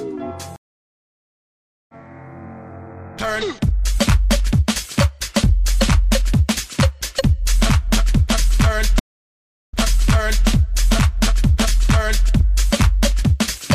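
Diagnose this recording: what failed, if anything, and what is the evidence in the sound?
The network stage failed: the stream connection dropped twice, and each time the player reconnected and started a fresh decoder mid-stream, a stream reconnect. From 0.56 to 1.95 s the audio goes silent for about 1.3 s and resumes about a second and a half further on, skipping material. From 8.99 to 10.48 s a 0.7 s silence is followed by a restart 0.79 s earlier, so a short stretch repeats as the server resends buffered data. Each return begins muted or faded in.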